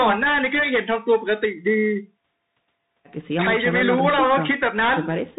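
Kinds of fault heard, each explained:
Bluetooth CVSD headset codec: speech throughout is squeezed into a narrow band with nothing above 4 kHz, and the one-bit step coder leaves a granular hiss underneath, scratchy s sounds and slope-overload grit on loud bright passages. Unlike a plain telephone-band filter, it adds that grainy texture.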